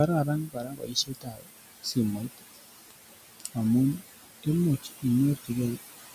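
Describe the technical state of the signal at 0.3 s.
At 0.3 s the speech sounds swallowed and faint, its soft consonants and word endings sinking into the background instead of standing clear of it. This is speech cut by the noise suppressor, running from 0.25 s to 1.51 s, with about a second of sound affected in all. The suppressor mistook these quieter speech components for steady noise and turned them down along with it, by about 21 dB at the deepest point.

Underneath, the background sinks between the words and rises under them. These are noise suppressor artifacts, present throughout the clip and so also at this moment. The suppressor estimates which frequency bands hold steady noise and lowers them frame by frame, here by about 19 dB. The room noise, which sits about 11 dB below the speech, is therefore pulled down between the words and comes back up under them at this point.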